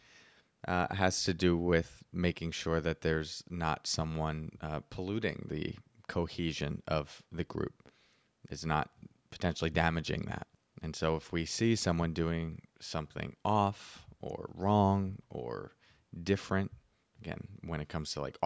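Nothing's amiss with this bit of speech; it came through a call's microphone processing, which trims off the deepest bass and leaves nothing above 8 kHz, and that's simply how that path normally sounds.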